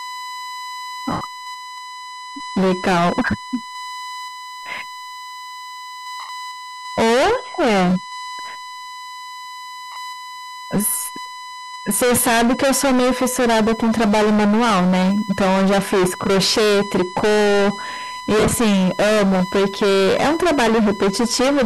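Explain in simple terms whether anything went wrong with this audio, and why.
A steady, high whistle at 1 kHz sits under the speech for the whole clip. This is USB whine: the USB connection pulls power in regular 1-millisecond bursts, and that rhythm leaks into the audio through the power or ground wiring, becoming an audible tone.

All through the clip, the speech sounds harsh and fuzzy on every loud moment, not just now and then. This is hard clipping: the signal was driven far louder than the equipment could handle, so the tops of its waves were chopped flat for a large share of the time, adding that gritty distortion.

There are short, smeared, hissy gaps at 1.12 s and 6.2 s (each about 90 ms), at 9.92 s (about 40 ms), and a broken-up stretch from 18.39 to 18.53 s. These are lost LE Audio frames: pieces of the Bluetooth stream never arrived, and the receiver filled the holes with a noisy copy of the last sound it had.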